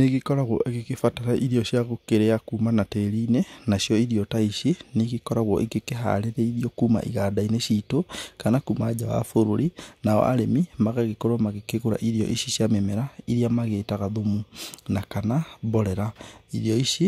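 A short bit of speech, and nothing technically wrong turns up anywhere in it.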